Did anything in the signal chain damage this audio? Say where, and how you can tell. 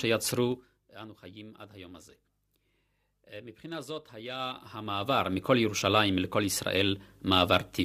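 Yes. A gain stage, most likely in the driver or buffer processing, moves the level in unsmoothed 2 dB jumps, producing zipper noise. From 0.46 to 0.8 s the speech drops by about 15 dB in rapid steps, roughly twenty a second, heard as a brief zipping rasp. From 4.32 to 5.58 s it rises by about 15 dB in slower steps, around seven a second, heard as distinct ticks. Each instant jump puts a small discontinuity in the waveform.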